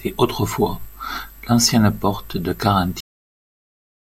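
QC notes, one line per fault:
3.00 s, cut-off end: the speech stops mid-sound and drops straight to digital silence for the remaining 1.1 s, because the final buffers were never written. Unlike a fade-out or a natural pause, there is no decay or room tail at all.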